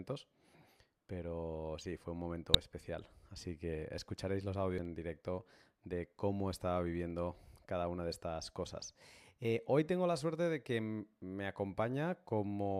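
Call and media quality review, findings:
Damaged data in a compressed stream: corrupted bytes in the encoded speech at 2.54 s and 4.78 s. Decoder misreads the affected frames and resyncs on the next valid header, leaving a brief blip, each only a few milliseconds long.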